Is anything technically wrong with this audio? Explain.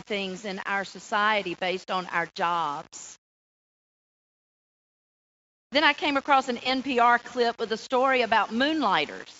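Yes. Grainy, gritty distortion runs through the whole speech clip, tracking the signal, with quiet passages turning gritty. The likely cause is low bit depth without dither, rounding that fits about 7 bits, leaving noise roughly 25 dB below the speech.

From 6.63 to 6.71 s there is a brief smeared, fading stretch: VoIP packet loss concealed by the speech codec. The decoder extrapolated over a gap that fits about 20 ms, and the voice stays weak afterward. The Speex coding itself adds little audible damage.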